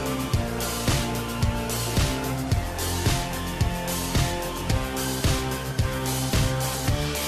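No technical faults are audible.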